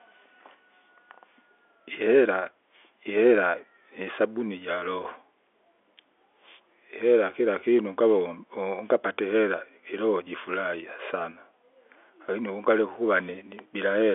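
Nothing's technically wrong with this speech recording: it's just ordinary phone-line audio from G.711 telephone coding, so everything sits in the usual telephone band and nothing comes through above about 3.7 kHz, which is simply how that format works.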